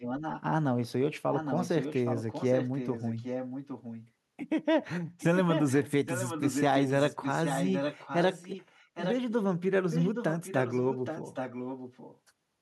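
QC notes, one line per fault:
0.00–0.42 s, 1.30–4.11 s, 5.19–9.16 s, 9.90–12.19 s: echo leak. A copy of the speech returns about 818 ms late, roughly 10 dB below it, and nearer 5 dB below at 5.19–9.16 s. The likely cause is a far-end loudspeaker whose echo canceller let the sound through.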